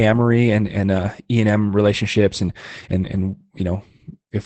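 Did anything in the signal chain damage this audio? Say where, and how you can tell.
Yes, at the codec stage: Opus voice compression spans the whole clip. The SILK linear-prediction coder runs in wideband, leaving nothing above 8.6 kHz, and its coarse excitation coding makes the speech plainly muffled, hoarse and slightly robotic, which fits a bitrate near 12 kbps.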